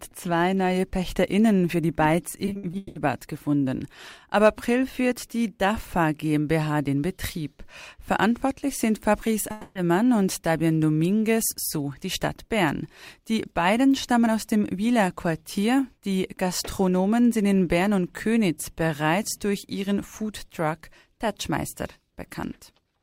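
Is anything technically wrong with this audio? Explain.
Yes, there are two network-related faults.

From 2.45 to 2.97 s there is repeated packet loss, which gives a robotic sound. Six separate holes open up in about half a second, and each is patched by stretching the sound that came just before it. About 320 ms is filled in this way, and the longest single hole lasts 180 ms, so roughly 62% of that stretch is concealment. It comes across as choppy, with fragments missing. It is a rapid run of small gaps with real audio in between, which sets it apart from one long outage.

From 9.51 to 9.77 s the audio breaks off as a single unbroken block of about 240 ms. That block is a fading continuation of the last sound, with no true silence. This is likely a long network dropout, where nothing reached the receiver for that span. The missing content never comes back. Unlike the earlier robotic stretch, it is one continuous hole rather than many short ones, and playback picks up after it with that part simply gone.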